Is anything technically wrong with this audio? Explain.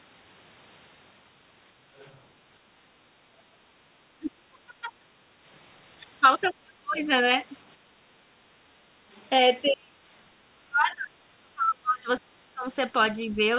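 Yes. Three kinds of echo-canceller faults occur.

Other side's voice leaking through: at 1.98 to 2.19, 6.41 to 6.48 and 9.15 to 9.25 s, a faint second voice appears, about 30 to 35 dB below the main talker. This is likely loudspeaker echo the canceller missed.

Speech suppressed in double talk: at 4.18 to 5.06, 6.49 to 6.97 and 9.69 to 13.4 s, the talker dips by up to about 35 dB. Both sides likely talk at once, and the canceller turns everything down.

Background gated by the echo canceller: between 7.78 and 8.98 s, the room sound drops by about 6 dB for roughly half a second in total. The canceller clamps the microphone while the loudspeaker plays.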